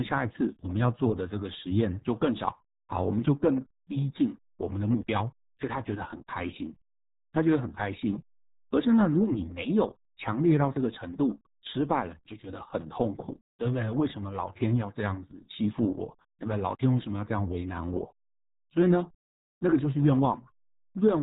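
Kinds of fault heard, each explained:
RealAudio 14.4 codec: The whole clip of speech has passed through the old RealAudio 1 dial-up codec. It squeezes sound into a tiny data stream, which fits a rate of about 8 kbit/s. Nothing above 3.8 kHz survives, so the top end is simply gone and the speech sounds muffled. The damage is heavy. The codec rebuilds speech from a crude model, which leaves a gargly, watery texture on the speech.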